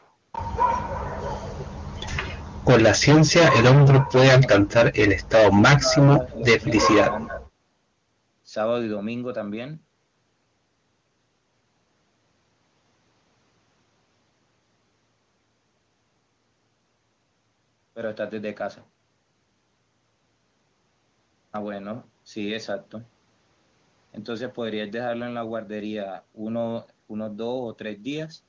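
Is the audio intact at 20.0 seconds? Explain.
Yes, the audio is intact at 20.0 seconds, with no fault at that point.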